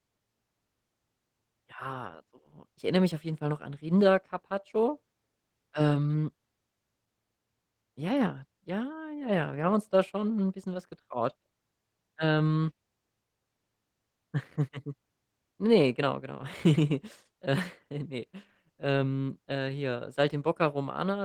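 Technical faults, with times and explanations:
throughout, Opus voice compression: the speech sounds grainy, slightly hoarse and robotic while keeping its full bandwidth. Linear prediction codes the band below 8 kHz with a thin transform layer above it, and the excitation is coarsely quantised, which fits a bitrate around 16 kbps.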